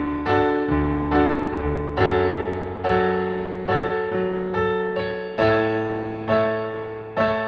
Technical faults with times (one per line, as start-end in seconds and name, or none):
1.25-2.91 repeated packet loss (robotic sound)
3.45-3.91 repeated packet loss (robotic sound)